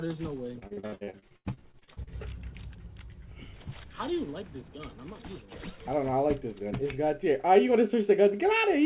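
From 0.59 to 2.10 s, repeated packet loss (robotic sound) breaks the audio into choppy fragments. Many gaps, up to 82 ms, are patched by stretching the last sound.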